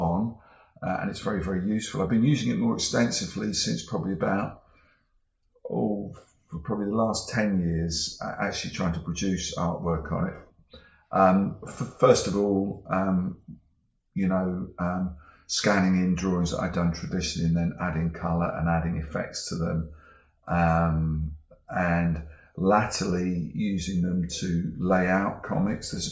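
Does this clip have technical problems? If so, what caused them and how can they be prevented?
No, this clip doesn't have any technical problems, so there is nothing to prevent.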